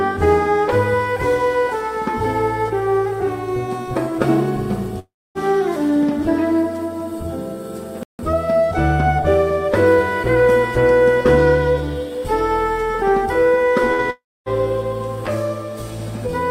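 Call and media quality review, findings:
Long network dropout, 4.99–5.38 s and 14.10–14.49 s. Last sound held, fading to silence, about 0.25 s silent. Roughly 0.36 s lost each time. Likely network path, concealment exhausted.

Playback stall, 8.03–8.19 s. Output drops to silence for 160 ms, then resumes where it stopped. Likely player buffer underrun or blocked audio thread.

Burst of packet loss, 13.93–14.01 s. Last sound held and faded to cover a 56 ms gap. Consecutive packets lost in transit, receiver concealment filled in.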